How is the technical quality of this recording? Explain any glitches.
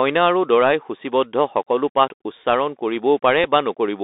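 The recording is narrowband and gritty throughout, with one small glitch near the end.

Across the whole clip the speech sounds boxed-in and phone-like, confined to roughly 250 Hz to 3.7 kHz, with scratchy s sounds and a fine granular hiss underneath. This is the Bluetooth CVSD headset codec, which fits 64 kbps CVSD. Each one-bit sample only steps the waveform up or down, so fast, loud high-frequency detail outruns the adaptive step size and turns rough.

At 3.44 s there is a brief tick, a Bluetooth headset packet repeated. A single voice packet, about 3.8 ms of audio, was lost on the link and the headset chip decoded the previous packet's bits a second time. Because this happened only once, it produced a tiny click rather than a sustained buzz.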